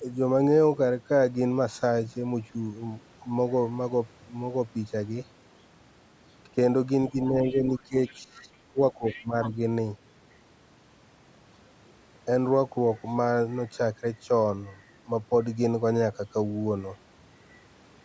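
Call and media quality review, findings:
Other side's voice leaking through: faint far-end speech in short scraps at 7.10–7.28, 7.52–7.60, 7.77–7.82, 8.07–8.43 and 9.04–9.25 s. Level roughly 20 to 35 dB under the near talker. Likely residual echo: the loudspeaker playback reaches the microphone and the echo canceller leaves part of it behind, most audible at 9.04 s where it sits only about 20 dB down.

Speech suppressed in double talk: near-talker level dips across 7.10–8.44 s, roughly 10 dB at its deepest, with about 0.7 s affected. It dips again at 8.72–9.53 s, roughly 15 dB, about 0.5 s affected. Both windows coincide with the leaked far-end scraps. Likely the echo canceller's suppressor failing to separate the local voice from loudspeaker echo while both sides talk, and attenuating both together.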